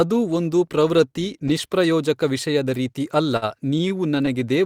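Repeated stalls (stutter) affect this speech from 3.23 to 4.53 s, just after "ವಿಷಯದ ರೀತಿ": eleven short holds, the longest 52 ms, where late packets drained the jitter buffer and the last sound was stretched, so delivery drags while nothing is lost.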